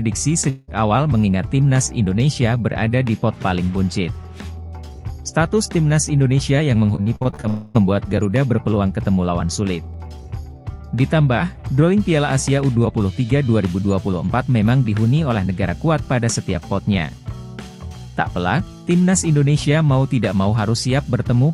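From 0.49 to 0.70 s the sound is replaced by a smeared, fading buzz for about 0.18 s, then resumes with that stretch missing, likely a long network dropout. Between 6.96 and 7.45 s, repeated packet loss breaks the audio into seven short holes, the longest 50 ms, each patched by extending the previous sound. About 39% of that span is concealed, giving a choppy, robotic texture. Right after, from 7.48 to 7.79 s, a second dropout, likely of the same kind, leaves about 0.26 s filled with a decaying buzz before the audio returns.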